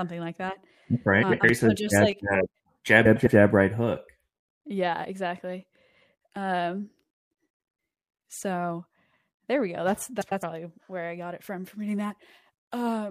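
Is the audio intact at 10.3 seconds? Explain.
No. From 10.21 to 10.43 s, just before "where I got it", the speech has frames out of order: two adjacent blocks of about 104.5 ms each play in swapped sequence, which fits runs of four codec frames being delivered and decoded in the wrong order. The stretch sounds like a garbled flutter. Nothing is lost, so the timing after the span is unaffected.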